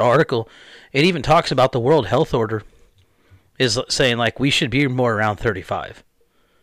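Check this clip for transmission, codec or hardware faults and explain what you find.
Harsh, crackly fuzz on the loud parts of the speech at 0.01–0.22 s, 0.98–2.35 s, 3.62–4.27 s, 4.62–4.83 s and 5.22–5.49 s is hard clipping. Peaks overdriving a stage by about 6, 9, 5, 2 and 2 dB were sliced flat, adding high harmonics. The 0.98–2.35 s stretch is the roughest.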